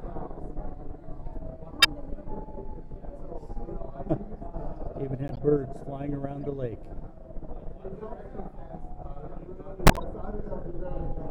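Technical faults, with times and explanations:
1.80–1.86 s, 5.28–5.39 s, 6.43–6.46 s and 9.86–10.00 s: corrupt frame decoded. Damaged compressed frames were played as if valid, so misread gains and codes put energy at the wrong frequencies, heard as brief chirps or noise bursts. Each lasts a few frames. The first and last are loud, near -10 dBFS, and the middle two are much fainter. On a spectrogram, look for short, sharp-edged vertical patches of misplaced energy.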